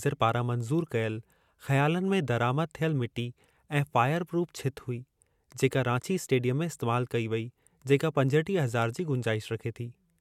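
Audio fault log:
No fault is heard in this speech clip.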